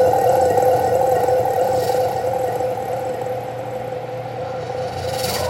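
Nothing stood out as a technical fault anywhere in the recording.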